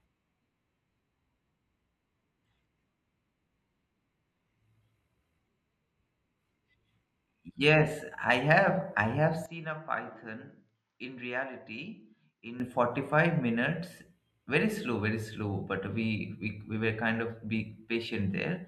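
At 9.46 s, right after "I have I have", the speech turns dull and drops roughly 10 dB, losing everything above 7.6 kHz and gaining a faint new noise floor, with no gap at the change. The input was likely switched to a poorer device; full bandwidth returns at 12.6 s.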